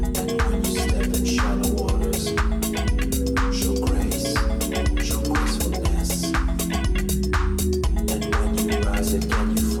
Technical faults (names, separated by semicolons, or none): none